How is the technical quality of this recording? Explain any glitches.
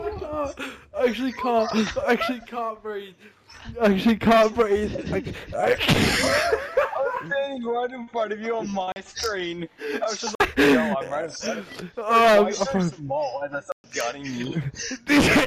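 The recording has three dropouts, each a block of digital silence: 8.92 to 8.96 s (40 ms), 10.35 to 10.40 s (49 ms) and 13.72 to 13.84 s (120 ms). Samples were zeroed, which points to a late output buffer. The sound cuts off abruptly, and the longest gap is heard as a brief hole. A waveform shows flat lines, and a spectrogram shows black gaps.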